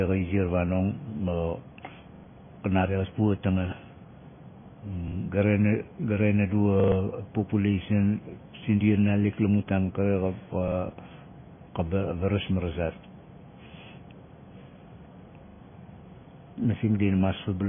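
The whole speech track is dull and watery, with nothing above 3.5 kHz, which points to heavy MP3 compression at a likely very low bitrate. Repeated buffers stutter at 2.16, 5.08, 6.8, 10.68 and 15.48 s, where a 40 ms chunk replays one to three times with hard joins and drops a short bit of audio.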